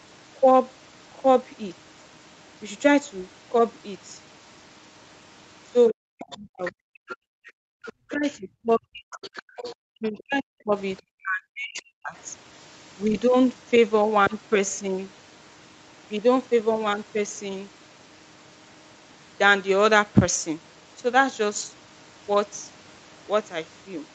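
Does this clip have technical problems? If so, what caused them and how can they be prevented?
Yes. From 5.88 to 8.17 s and again from 9.12 to 10.23 s, a second, fainter voice from the other side of the call leaks through, about 15 dB and then about 20 dB below the main talker. This is other side's voice leaking through, likely because the talker's loudspeaker output reached the microphone and the echo canceller left a residue of it. A headset, or lower speaker volume with better acoustic echo cancellation, would prevent it.

The talker's own speech sinks sharply, by roughly 40 dB at its deepest, from 5.91 to 7.09 s, from 7.90 to 9.22 s and from 9.87 to 12.16 s, with around a second, a second and two seconds affected. This is speech suppressed in double talk, likely caused by both sides speaking at once so that the canceller could not separate the talker from the echo and turned everything down. 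Using a headset, or a canceller with better double-talk detection, would prevent this.

The room sound drops out abruptly from 7.37 to 7.62 s, by about 40 dB over roughly 200 ms, and from 9.50 to 9.57 s, by about 30 dB over roughly 70 ms. This is background gated by the echo canceller, which clamped the microphone hard while the loudspeaker played and released it afterwards. Gentler suppression settings, or removing the loudspeaker echo with a headset, would avoid these gaps.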